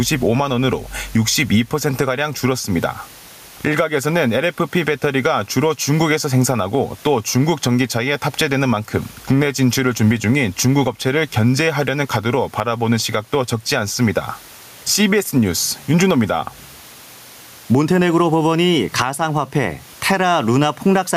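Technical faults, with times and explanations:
Throughout, gain pumping. The room noise sits about 35 dB below the speech. The gain swing is roughly 10 dB. Loud and soft passages end up too close in level, so the speech sounds squashed. The likely cause is input gain set far too high, with a fast limiter or compressor pulling it down on every loud sound.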